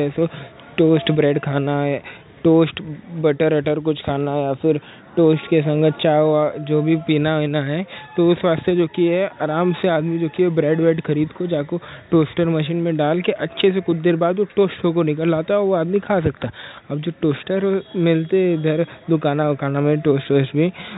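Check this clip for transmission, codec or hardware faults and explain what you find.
I find no transmission, codec or hardware faults in this clip.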